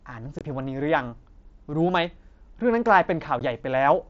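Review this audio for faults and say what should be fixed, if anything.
Unconcealed Bluetooth headset packet loss occurs at 0.39 to 0.41 s and at 3.39 s. Audio packets between headset and phone went missing. Silence replaced them, leaving holes with abrupt edges. The gaps last 22.5 ms and 15 ms, which fits three and then two lost packets on the mSBC link. Turning on packet loss concealment and keeping the headset close to the phone would prevent these holes.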